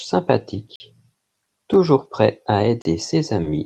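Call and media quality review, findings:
Block of digital silence, three dropouts in speech: 0.76 to 0.80 s (43 ms), 1.74 s (3 ms tick), 2.82 to 2.85 s (32 ms). Output buffer likely underran, the first gap fitting a 2048-sample block. Waveform shows flat near-silent runs with hard edges. Spectrogram shows blank vertical gaps.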